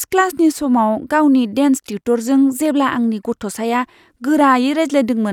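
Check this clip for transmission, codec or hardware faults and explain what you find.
No faults are audible here.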